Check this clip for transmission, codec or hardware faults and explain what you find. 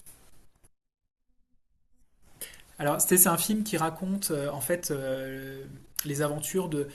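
One codec fault is audible in this speech. Compressed frames skipped at 2.43 s: the speech jumps ahead by roughly a tenth of a second, which fits about four 21.3 ms frames dropped.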